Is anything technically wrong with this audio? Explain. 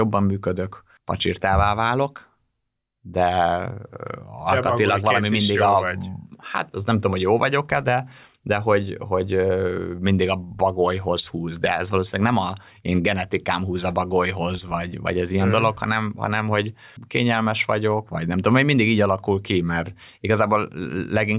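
No, the speech signal shows no technical faults anywhere in the recording.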